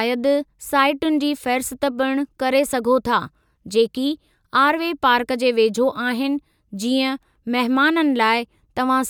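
No technical faults can be heard in the speech recording. No point in the audio stands out as a problem.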